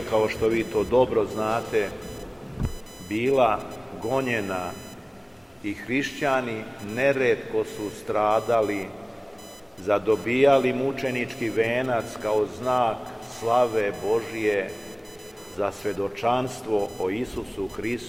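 From the first second to the end there's computer activity noise sitting under the sound, a thin chirpy buzz pulsing somewhere around 1 kHz, roughly 25 dB below the signal. It's what you get when the machine's processor or graphics load shifts the ground the audio circuit shares, so the buzz tracks what the computer is doing rather than anything in the program material.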